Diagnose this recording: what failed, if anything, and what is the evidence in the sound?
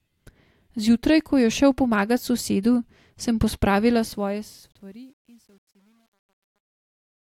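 The failure is truncation distortion on a fade, at a digital gain or sample-format conversion stage. From 3.89 s the speech turns grainy as the fade-out pulls the level down. From 4.72 s to the end at 7.23 s it is at its worst, with the coarse stepping fitting roughly a 10-bit word length and no dither. Unlike codec artefacts, the grit follows the fade level rather than the content, worsening steadily as the signal nears the lowest step.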